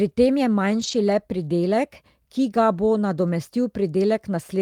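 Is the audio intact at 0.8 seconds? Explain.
No. A lost packet rebuilt from error correction runs from 0.79 to 0.93 s, just after "tem je". Packets went missing there, but each following packet carried a low-bitrate copy of the lost one, and the decoder played that copy instead of leaving silence. The result is no gap, but roughly 80 ms of rougher, noisier sound, which points to four separate packets being lost.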